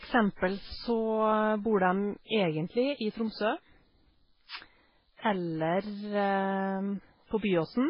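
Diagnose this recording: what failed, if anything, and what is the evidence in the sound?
The codec stage is where this went wrong: the speech has nothing above 5.3 kHz for the whole clip, with doubled-up artefacts that fit transcoding between lossy codecs, likely a very low-bitrate MP3 re-encoded to low-bitrate Vorbis. The second encoder spent its bits on the first one's damage and stacked its own on top.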